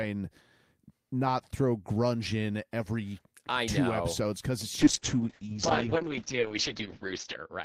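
From 4.86 s to the end, the speech turns rough and watery, and its top end goes muffled. This is a call bitrate drop: the encoder's rate fell from 40 to 7 kbps, holding bottom for about 2.5 s, and bandwidth shrank from 20 kHz to 8 kHz.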